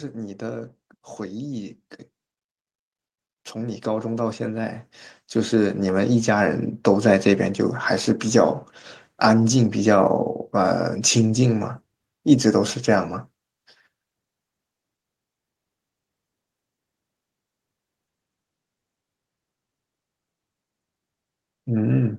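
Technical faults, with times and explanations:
0.14–1.83 s and 3.53–6.67 s, automatic gain rising: the gain control judged the input too quiet and raised its gain, by about 5 dB, then about 10 dB over three seconds. The background noise swells along with the speech, which distinguishes this from a talker simply speaking louder or from a sudden level step.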